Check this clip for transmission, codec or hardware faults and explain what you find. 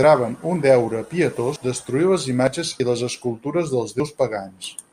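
Four small jumps forward, at 0.56, 1.56, 2.8 and 4.0 s, likely a dropped buffer (overrun). The hardware overwrote samples before they were read, so roughly 40 ms vanishes each time (nearer 70 ms at 1.56 s, just before "destruir les imatges i") and the two sides snap together without any gap.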